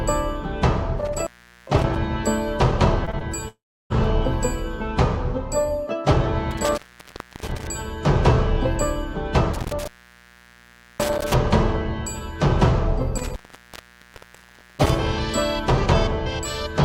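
Right at 0.98 to 1.96 s there's an intermittent contact, a loose plug or cable opening up. The sound cuts out for about 0.41 s with crackle at both edges and just faint hiss in the gap.

Then three short concealed packet losses land close together at 3.05 to 3.09, 3.11 to 3.15 and 3.19 to 3.22 s. Each is about 20 ms that never arrived. The receiver papered over them by extending the last sound, so you hear quick smears or wobbles rather than holes.

At 3.48 to 3.92 s the sound stretches into a fading buzz or hiss, then goes silent for about 0.33 s before returning with roughly 0.42 s missing. That's likely a long network dropout.

The intermittent contact comes back three more times, each opening longer: 6.51 to 7.67 s (about 0.65 s open), 9.54 to 11.34 s (about 1.12 s) and 13.18 to 14.97 s (about 1.44 s). Each has the same crackly edges around a hissy gap.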